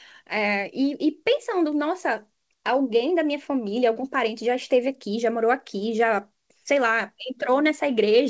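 At 3.94 to 3.97 s, short concealed packet loss: 20 ms of audio missed the decoder, so the receiver extended the preceding sound across the gap, leaving a brief smear.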